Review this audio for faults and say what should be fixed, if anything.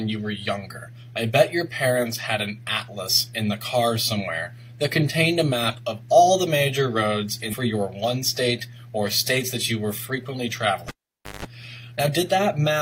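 At 7.49 to 7.55 s the sound abruptly jumps forward with a small blip, as though a stretch of the programme were cut out. The likely cause is a stream segment skipped: one chunk of the segmented stream failed to load and playback resumed at the following segment. Prevent it with a larger player buffer and segment retry before advancing.

From 10.88 to 11.45 s there is a pop, then about half a second of near silence, then a 0.17 s burst of 50 Hz mains buzz and a second pop as the sound comes back. This is the cable pulled and plugged in while live: contact breaks, the tip alone picks up hum, and full contact snaps the signal back. Prevent it by muting the channel before handling connectors, and secure or replace the loose cable.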